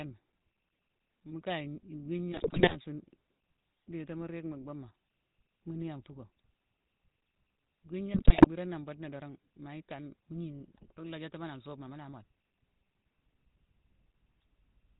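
Speech runs through the whole clip with a buzzy, gravelly roughness. Nothing comes through above 4 kHz. That is the sound of the GSM full-rate codec, which fits the 13 kbps GSM full-rate scheme. It rebuilds the voice from a vocal-tract model driven by a thinned pulse excitation. There are two bursts of GSM bit errors, from 2.32 to 2.75 s and from 8.14 to 8.48 s. Each one breaks into squawks, pops and gargling. Corrupted filter, pitch and gain values reach the decoder and warp the spectrum or the level frame by frame.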